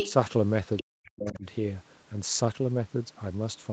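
A DC offset runs through the whole speech clip. The waveform sits shifted off the zero line by a constant amount. You cannot hear it as a tone or hum, which sets it apart from low-frequency rumble or mains buzz. It shows up only as steady energy at the very bottom of the spectrum and as lost headroom on one side of the waveform.

From 0.0 to 0.13 s a second voice comes through at roughly the same level as the talker. This is most likely the other side's voice leaking through: the far end played on the loudspeaker and was picked up again by the microphone, and the echo canceller did not fully remove it. It returns more faintly, about 15 dB down, at 0.77–0.84 s, and again around 20 dB down at 1.06–1.38 s.

Overlapping those later scraps, from 0.82 to 1.45 s, the talker's own speech is suppressed in double talk, in pieces adding up to about half a second. With both sides active, the canceller likely clamped down on everything, with dips reaching around 40 dB. 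This all happens within a call microphone path that carries nothing above 8 kHz.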